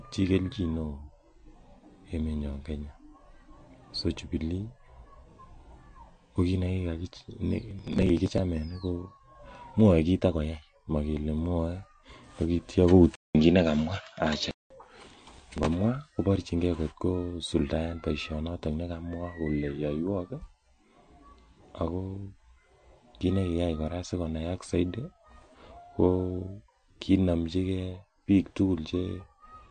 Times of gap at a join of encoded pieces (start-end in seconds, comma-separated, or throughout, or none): none